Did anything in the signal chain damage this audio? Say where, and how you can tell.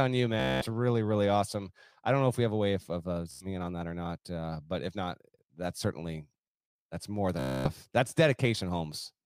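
Yes: Bluetooth stutter on the wireless link at 0.40–0.66 s, 3.31–3.46 s and 7.39–7.70 s. Lost packets make the receiver loop a short slice as a buzz, then skip ahead.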